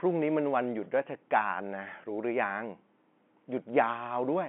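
Nothing stood out on listening to this speech recording, which carries the narrow band of a telephone line, with no sound above about 3.7 kHz.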